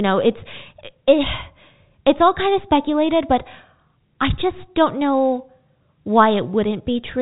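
A stretch of speech carried over ordinary G.711 telephone coding, topping out around 3.8 kHz the way a phone line does, and there's really nothing wrong to point at here.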